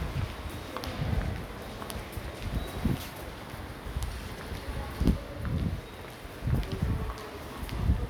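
No technical faults occur at any point in the audio, so there is nothing to describe in time order.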